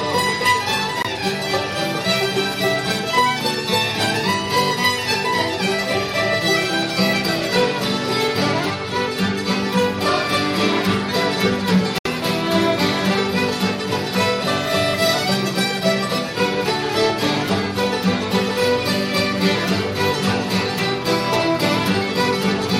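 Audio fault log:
1.02–1.07 s and 11.98–12.07 s: Bluetooth dropout. The sound cuts abruptly to silence, then resumes further along, as if it had played on. The likely cause is audio packets reaching the headphones too late and being dropped.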